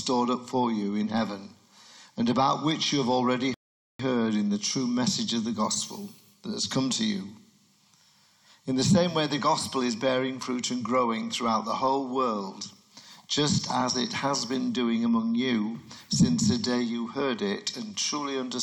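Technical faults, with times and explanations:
3.54 to 3.99 s, rebuffering stall: the sound drops abruptly into about 0.45 s of dead silence, then picks up again at exactly the point where it broke off, with nothing skipped or repeated. The player had used up all the audio it had downloaded and had to wait for more data before continuing. The content is intact, but the pause makes the clip run that much longer.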